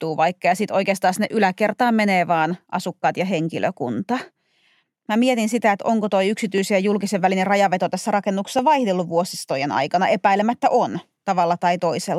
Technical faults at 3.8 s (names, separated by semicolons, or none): periodic USB or driver dropouts